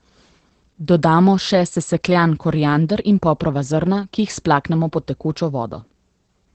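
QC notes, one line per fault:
Throughout: Opus voice compression. The speech sounds muffled, slightly hoarse and faintly robotic, with plainly audible coding damage. Nothing reaches above about 8.5 kHz, consistent with SILK running in wideband mode, where a linear-prediction model shapes a coarsely coded excitation in 20 ms frames at what sounds like about 12 kbps. On a spectrogram the energy stops at a hard ceiling near 8.5 kHz, and the harmonics look smeared and grainy below it.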